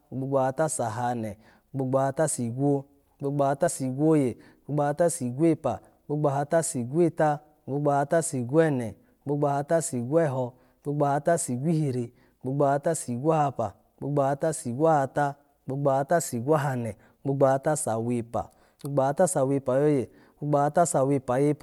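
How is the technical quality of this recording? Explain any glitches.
One glitch is audible. At 3.66 s, just after "gbogbo ahata sigwo gbogbo", a compressed frame is skipped. About one 24 ms frame is dropped, so the speech jumps ahead by about 20 ms.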